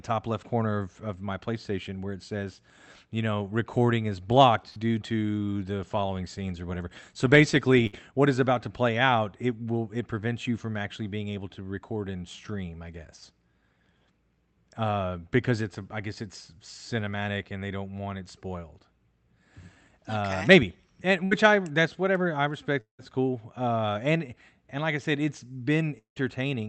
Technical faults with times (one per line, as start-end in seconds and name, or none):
4.69-4.80 burst of packet loss
7.87-7.96 burst of packet loss
21.25-21.34 burst of packet loss
22.81-23.02 long network dropout
25.99-26.19 long network dropout